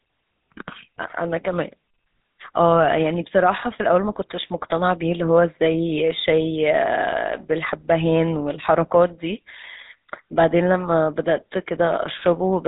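Throughout the speech there is a buzzy, gravelly roughness and a dull, boxed-in tone with nothing above 3.8 kHz. This is GSM full-rate codec damage, plainly audible, which fits a 13 kbps stream. The vocal tract is modelled and driven by sparse, regularly spaced pulses rather than the real excitation.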